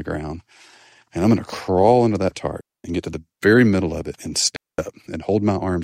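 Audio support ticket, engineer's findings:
Digital wireless dropout, 2.61–2.84 s: clean 236 ms hole between "to crawl under that" and "get to the very". No noise burst either side. Receiver losing too much link data, muting with a very short fade.

Digital wireless dropout, 4.56–4.78 s: same signature, 222 ms near-silent gap after "middle of it and". Points to a recurring wireless link problem at the receiver.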